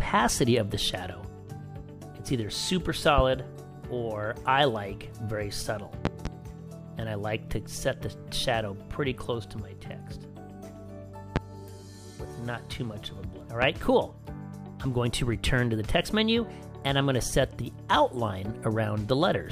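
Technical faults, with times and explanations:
3.18–3.21 s, 6.05–6.29 s, 11.36–11.39 s and 13.62–13.65 s, loud pop: sharp pops, a quick double at 6.05 s, jump about 15 to 20 dB above the sound, which keeps going underneath. They're likely voltage spikes from a switch, plug contact or static, shaped in the circuitry downstream.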